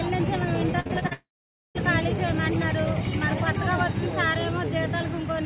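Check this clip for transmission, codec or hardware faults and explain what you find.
Two transmission faults follow one another early in the clip, heard through a call path whose band stops at 4 kHz, which fits G.711 A-law at 64 kbps.

Repeated packet loss (robotic sound) runs from 0.80 to 1.13 s. Four short gaps, the longest 50 ms, are each patched by stretching the preceding sound, so about 39% of that span is filler. The result is choppy, with pieces missing. Unlike a dropout, the sound keeps resuming between holes.

A long network dropout follows from 1.13 to 1.77 s, with about 0.62 s of audio missing. The patched-over sound decays into roughly 0.48 s of silence before the audio returns, skipping what was lost. This is one sustained break, likely a stalled connection, rather than the rapid chopping before it.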